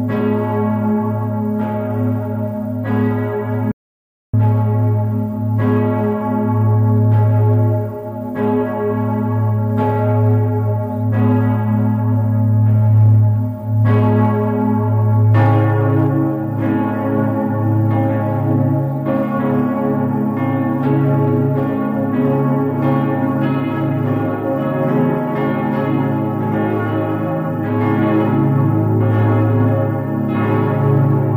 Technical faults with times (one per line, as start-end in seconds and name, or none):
3.72-4.33 audio dropout to silence